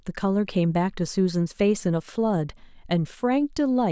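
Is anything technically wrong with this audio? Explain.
No, nothing technical is wrong.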